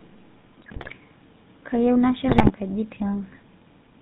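Across the whole recording the speech carries the GSM full-rate codec sound, plainly audible and consistent with the 13 kbps full-rate coder. The codec models the vocal tract as a filter and excites it with a regular pulse train built from only every third excitation sample, so fine detail between pulses is lost. Nothing above 4 kHz is passed, leaving the voice band-limited, and the coarse excitation gives it a buzzy, gravelly roughness.

From 0.62 to 0.90 s, and again from 2.28 to 2.50 s, GSM bit errors break up the signal. Corrupted bits reached the decoder and scrambled the filter, pitch and gain parameters, so the spectral shape distorts and the level jumps from frame to frame. Each burst sounds like squawks, pops and gargling. The second is slightly shorter, with a higher error rate over roughly ten frames against about fourteen in the first.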